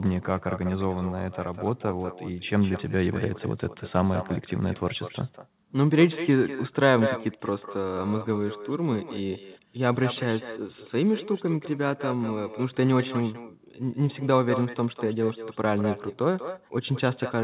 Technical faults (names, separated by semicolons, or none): echo with no canceller